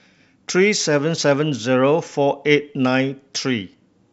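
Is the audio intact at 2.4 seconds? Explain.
Yes, the speech at 2.4 seconds plays through intact, with no dropout, click, distortion or other fault at that moment.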